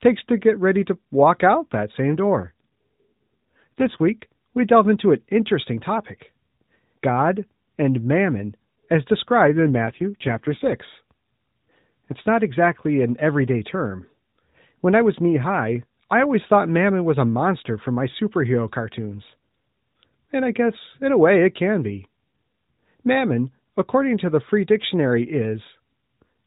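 At 2.40 to 3.99 s and again at 9.48 to 10.74 s the speech turns rougher, buzzier and more synthetic, then recovers. That is an AMR rate drop, where the link pushed the narrowband mobile codec down from about 12.2 kbps to something like its 5.9 kbps mode. Unlike packet loss there is no gap or dropout, and unlike a bandwidth cut the band stays the same, still topping out near 4 kHz.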